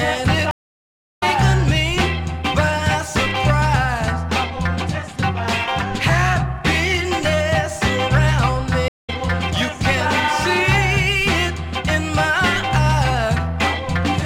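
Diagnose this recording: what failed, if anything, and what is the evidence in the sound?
The failure is at the network stage: a stream reconnect, heard twice. At 0.51 s the sound drops out for about 0.67 s. It comes back at 1.23 s, roughly 0.4 s further along than where it stopped. At 8.88 s a shorter gap of 0.16 s follows, ending at 9.10 s, with the material again skipping forward by about 0.2 s. The connection dropped each time. The player went quiet, reconnected and started a new decoder partway into the live stream.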